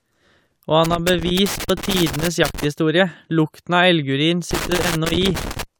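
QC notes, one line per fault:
0.85–2.65 s and 4.51–5.63 s, loose connector crackle: two irregular bursts of scratchy crackle over the speech. A worn or dirty contact keeps making and breaking as it shifts, chopping the signal on and off, with any DC on the line adding little pops.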